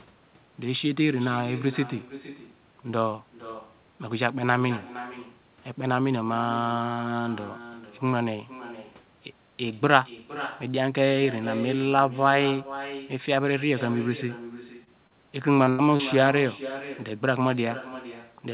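Echo with no canceller runs through the whole of this speech recording: every phrase is followed, about half a second later, by a copy roughly 14 dB quieter and thinner. That points to the far end playing the call over a loudspeaker into its own microphone, with nothing cancelling the returned signal, so the talker's voice comes back after the network round trip. Short concealed packet loss appears at 14.84, 15.07, 15.64 and 15.96 s. Each gap is about 50 to 60 ms long, with roughly 30 ms of audio actually missing, and sounds like a brief smear or wobble. In each case the receiver covered the hole by extending the preceding sound and then crossfading back into the real signal, so a short consonant can slip away. A burst of packet loss follows directly after the third short gap, from 15.69 to 15.81 s, about 120 ms in all. Here the concealment held the last sound and let it fade, producing a sustained buzz or a dying hiss, and roughly 90 ms of the speech is simply gone when the audio resumes. 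The call path carries nothing above 4 kHz, consistent with a narrowband G.711 codec.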